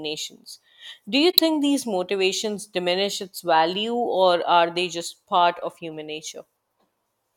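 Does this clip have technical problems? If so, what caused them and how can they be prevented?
Yes. From 1.32 to 1.39 s, about 70 ms, the speech is disrupted. This is a corrupt frame concealed: bit errors damaged part of the AAC stream, a span that points to a few consecutive frames, and the decoder detected them and papered over the gap with muting or a scrambled copy of the last good spectrum. Protecting the stream with error correction or retransmission on the link prevents it.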